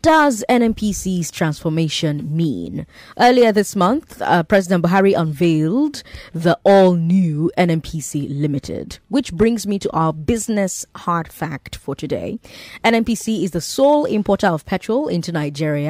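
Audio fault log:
0.23–15.72 s, clock slip clicks: faint ticks about every 0.2 s, likely from one-sample slips between unsynchronised clocks differing by roughly 100 ppm.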